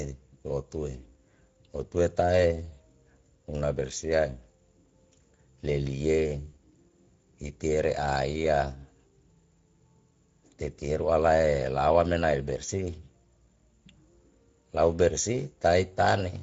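A speech recording with Speex codec coloring throughout: a hoarse, noisy quality rather than the swirly smearing of transform codecs, which fits a rate near 17 kbps. From 6.47 to 6.55 s, VoIP packet loss concealed by the speech codec stretches the voice into a fading buzzy tone or coloured noise for about 60 ms, roughly three 20 ms frames, instead of a hard dropout or click.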